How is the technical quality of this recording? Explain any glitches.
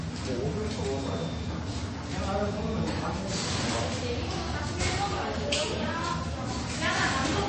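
Quality takes a clear hit, and it lasts the whole clip. It's likely MP3 compression: nothing comes through above 8.3 kHz, so the top end sounds dull. With bits this scarce, the encoder drops weak frequency lines that flicker in and out between frames, giving a watery, swirly texture, metallic chirps on bright sounds and smeared attacks. The damage is heavy enough to point to a very low bitrate, around 32 kbps.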